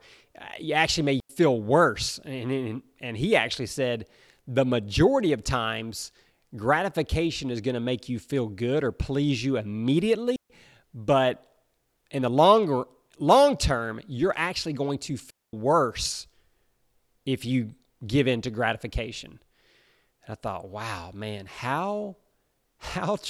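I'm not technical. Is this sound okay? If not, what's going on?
No, the sound cuts out three times: at 1.2 s for about 90 ms, at 10.36 s for 140 ms, and at 15.3 s for 230 ms. That's a digital wireless dropout: the wireless mic link briefly lost too much signal, so the receiver muted cleanly instead of crackling.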